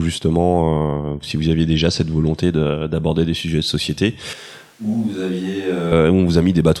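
At 4.33 s, after "des sujets de société", the speech abruptly turns hollow and roomy, about 10 dB quieter, with thinner bass and more room noise, until 5.92 s. This is a switch to a distant microphone, likely because the close one failed. The reverberation sets it apart from a plain level drop.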